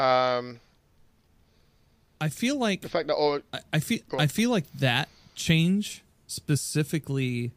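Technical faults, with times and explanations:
0.51 s and 4.38 s, dropped samples: a fraction of a millisecond of samples likely lost from the stream, so the waveform jumps straight to a later value. Each jump is a single sharp click, the second between "I I feel I" and "like that change".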